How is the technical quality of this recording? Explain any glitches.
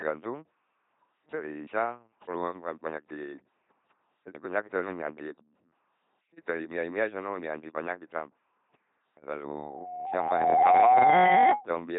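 The quality is poor, with heavy vocoder coding throughout and a feedback squeal near the end.

Throughout, the speech has a buzzing, mechanical robot quality, with nothing above 3.8 kHz. This is LPC-10 vocoder damage, consistent with a 2.4 kbit/s coder. A ten-pole vocal-tract filter is excited by either a pulse train or noise, so each moment becomes wholly voiced or wholly unvoiced.

From 9.48 s to 11.67 s, a steady 731 Hz tone swells over about a second into a squeal roughly 15 dB above the speech. This is loudspeaker feedback squeal. The microphone picks up its own loudspeaker, and at 731 Hz the loop gain exceeds one, so that tone keeps growing.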